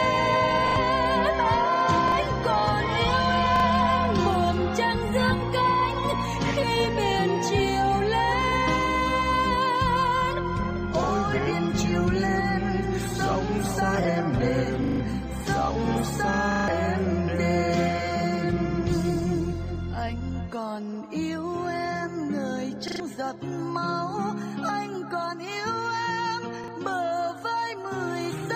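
Repeated buffer stutters occur at 0.68–0.76, 2.08–2.12, 3.56–3.64, 14.84–15.0, 16.52–16.68, 22.88–23.0 and 26.64–26.68 s. Each time, new audio arrived late, so the same short slice, which fits a 40 ms buffer, replays one to four extra times with hard joins. Each event drops anywhere from a few hundredths of a second to roughly a sixth of a second of audio.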